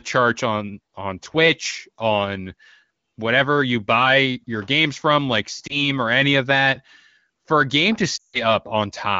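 Lost AMR speech frames at 5.67–5.80 s and 8.17–8.42 s in this speech clip. The decoder reuses the last good pitch and vocal tract settings at falling gain. The first is a brief dip or warble, fitting one 20 ms frame. The second drops to near silence within two frames, suggesting about 160 ms lost, then recovers roughly.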